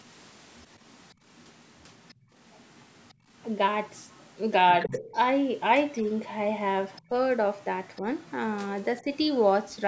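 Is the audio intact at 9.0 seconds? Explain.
No. From 8.97 to 9.76 s there's the other side's voice leaking through, very faint, well under the talker. The likely cause is a loudspeaker on the talker's device feeding the far end back into the mic, with the echo canceller leaving a quiet residue.

Right in that stretch, from 9.02 to 9.07 s, the speech gets suppressed in double talk. It's a short, shallow dip in the talker's level, only about 50 ms long. The likely cause is both sides overlapping, so the canceller couldn't tell speech from echo and pulled everything down briefly.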